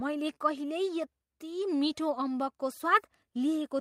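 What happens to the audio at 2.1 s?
A lost packet rebuilt from error correction at 2.09 to 2.11 s: the next packet's low-bitrate copy fills the gap, so the speech there briefly sounds rougher and noisier.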